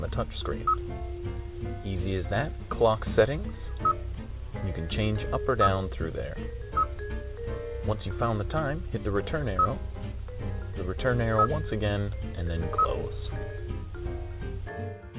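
No faults are audible; the audio sits in a narrow telephone band with nothing above 4 kHz, consistent with a G.711-type call codec at 64 kbps, and carries only that codec's normal coding noise.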